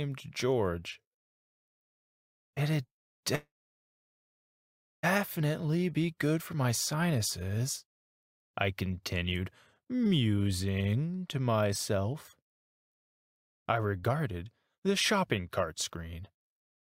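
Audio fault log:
3.35 to 5.05 s, call audio freeze: sound stalls, a brief fading hiss then about 1.55 s silence, resuming where it stopped. Likely delayed packets emptied the jitter buffer.
5.61 to 5.78 s, jitter buffer slow-down: repeated pitch periods add 36 ms of sound. Playback runs at 84% speed, same pitch, drawn out.
11.97 to 16.83 s, jitter buffer speed-up: short pitch-period pieces removed, roughly 0.3 s in all. Playback runs at 106% speed, same pitch, a little hurried.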